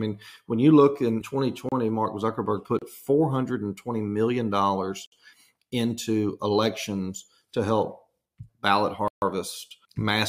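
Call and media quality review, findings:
Blocks of digital silence at 1.69 s (31 ms), 2.79 s (29 ms), 5.06 s (59 ms), 9.08 s (139 ms). Hard cuts to silence. Probable output buffer underrun.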